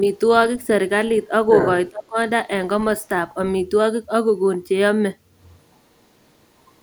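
A speech recording with two echo-control faults. From 1.49 to 1.7 s the other side's voice leaks through, nearly as loud as the talker, likely because the echo canceller left loudspeaker pickup in the microphone signal. From 1.9 to 2.17 s speech is suppressed in double talk, dipping by around 20 dB for roughly a third of a second, likely because the canceller turned down both voices while they overlapped.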